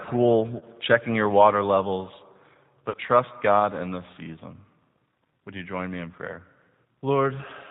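The speech passes through a low-bitrate CELP codec, which fits the 8 kbit/s G.729A codec. The decoder rebuilds the signal from a vocal tract filter, a pitch predictor and a handful of pulses per frame rather than the original waveform, so the speech is plainly rough and slightly synthetic throughout. Nothing above 4 kHz survives, which leaves a narrowband, muffled top end.

From 0.60 to 0.64 s, about 20 ms of the stream goes missing, which points to a single lost packet. This is VoIP packet loss concealed by the speech codec: the decoder fills the hole by extending its last pitch and filter settings at falling gain. The result is a brief stretched smear in place of the real sound, and the signal stays affected for a moment after real data returns.

From 2.90 to 2.97 s, about 40 ms is lost, which suggests two consecutive packets, and the same concealment fills the gap. Because the guess runs twice as long, the gain drops further, and the sound stretches out and fades. 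Each decoded frame builds on the one before, so the damage carries a little past the end of the gap before the speech recovers fully.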